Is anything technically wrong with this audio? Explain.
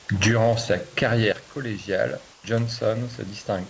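Yes, there is one fault. Comfort noise in place of the background occurs from 2.32 to 2.44 s. For 120 ms the real room background gives way to a steady, featureless hiss about 3 dB quieter. This is likely because the sender's voice detector paused transmission and the receiver filled the gap with synthesised noise. The audio stops at 8 kHz, which fits a G.722 call path, and the room noise sits about 27 dB below the speech.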